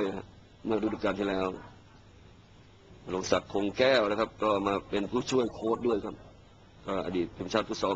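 No technical faults can be heard anywhere here.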